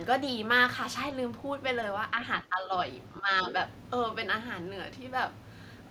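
From 2.43 to 2.73 s, and again from 3.2 to 3.3 s, the speech is suppressed in double talk. The level drops by roughly 10 dB in short dips. This is likely an echo canceller mistaking simultaneous far-end and near-end speech for echo and attenuating both.

From 3.45 to 3.53 s, the other side's voice leaks through as a brief fragment sitting around 10 dB below the speech. The likely cause is loudspeaker echo that the canceller failed to fully remove from the microphone signal.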